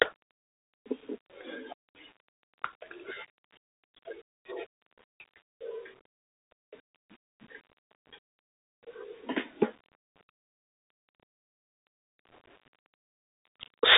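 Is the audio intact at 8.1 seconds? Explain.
No. The Bluetooth CVSD headset codec runs through the whole clip, 8.1 s included. Speech is limited to 300 Hz–3.7 kHz, and one-bit slope tracking adds scratchy sibilants and granular hiss.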